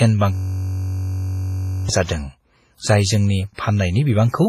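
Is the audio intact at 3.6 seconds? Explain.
No. Pre-echo runs from 3.54 to 3.58 s, spreading about 41 ms ahead of a sharp attack that arrives just before 3.6 s. The codec shares its quantisation noise across a whole transform block, so when the attack sits late in that block, noise scaled for the loud onset also fills the quiet stretch before it. The result is a short hiss leading into the onset, which itself sounds softened and smeared rather than crisp.

WMA compression shapes this moment too, as it does the whole speech clip. The damage is heavy. It sounds ringing and washy, with a hiss that rises and falls with the signal, and nothing remains above 15.4 kHz. That character is likely due to a WMA 1 encode at a low bitrate, about 24 kbps. Its long blocks are what give the pre-echo room to spread as far as it does.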